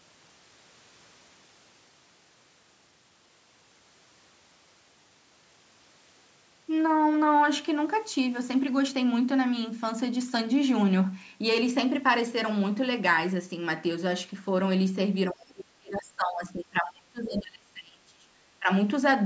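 Speech, with speech suppressed in double talk from 15.31 to 18.42 s, sinking by roughly 30 dB, and again from 18.59 to 18.69 s, about 15 dB down. An echo canceller likely ducked the talker during overlap.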